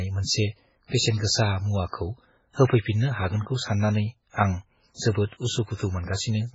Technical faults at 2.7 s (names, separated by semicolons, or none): MP3 compression; pre-echo